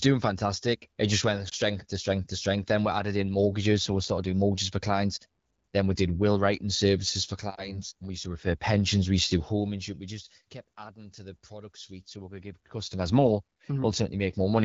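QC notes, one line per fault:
1.49–1.54 s, lost AMR speech frame: right after "just went" there's a quick dip and warble before "to strength to strength". It sounds like one dropped frame, about 20 ms, that the wideband decoder covered by repeating its last settings.
7.55–7.81 s, lost AMR speech frame: just after "will writing services for" the sound briefly smears and sags. Again it fits a single missing frame, with the concealment fading the gain, then the audio recovers a little rough.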